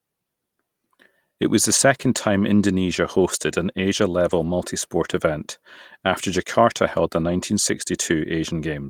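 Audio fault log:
4.29–4.47 s and 7.19–7.33 s: lost packet rebuilt from error correction. The speech runs on without a gap, but about 100 ms and then 80 ms turn rougher and noisier, which points to roughly five and four separate lost packets. Each was replaced by the low-bitrate copy carried in the following packet. Unlike concealment, which smears or repeats the preceding sound, these stretches still follow the actual speech, only coarser.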